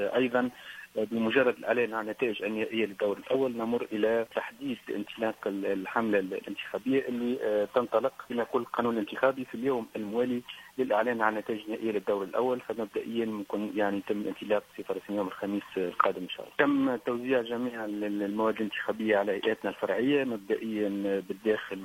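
At 3.3 s the audio breaks into a brief glitch lasting about 60 ms, ending at 3.36 s. This is damaged data in a compressed stream: a stretch of the encoded bytes arrived corrupted, so the decoder could not interpret the frames covering that moment. It produced garbled output, or dropped those frames, until it regained sync at a valid frame header, leaving a short disturbance where clean sound should be.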